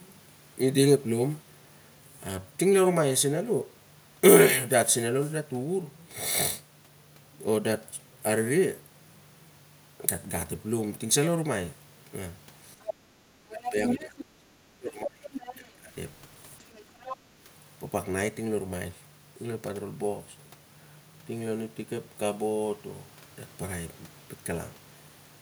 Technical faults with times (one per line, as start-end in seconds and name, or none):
12.82-12.94 other side's voice leaking through
12.97-15.93 speech suppressed in double talk
13.61-14.25 other side's voice leaking through
15.33-15.55 other side's voice leaking through
16.73-17.17 other side's voice leaking through